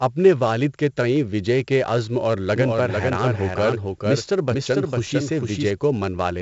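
Throughout, the speech has passed through 4-bit ADPCM compression, which points to a 64 kbps stream. The coarse, heavy quantisation leaves gritty hiss riding every loud sound, with nothing above 7.7 kHz.

From 2.56 s, just after "وجے کے عزم اور", to 5.70 s, a doubled audio track likely comes from a second, slower capture path. A dry copy about 5 dB quieter trails roughly half a second behind, starting and stopping abruptly.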